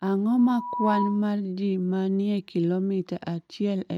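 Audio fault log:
0.38–1.28 s, loudspeaker feedback squeal: a pure tone near 981 Hz swells over roughly half a second until it sits a few decibels above the speech, then stops just before "ji ma ni e". The microphone was hearing its own loudspeaker, and at that one frequency each pass around the loop came back louder than it went in, so the tone fed on itself and kept growing.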